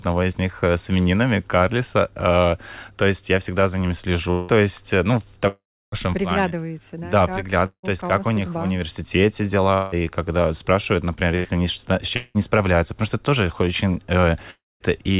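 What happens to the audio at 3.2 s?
Nothing goes wrong at 3.2 s: the speech continues intact through that moment, carrying only the steady narrowband sound of the call path, with nothing above 4 kHz, which fits G.711 mu-law telephone coding.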